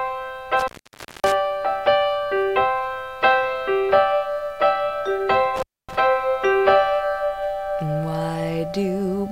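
The audio drops out twice from an intermittent contact. The first fault runs from 0.59 to 1.32 s, with the line open for 0.56 s. The second runs from 5.56 to 5.95 s, open for 0.26 s. Each time, a loose plug or cable briefly loses connection. The signal vanishes, leaving only faint hiss. Crackle marks the edges as the contact breaks and remakes.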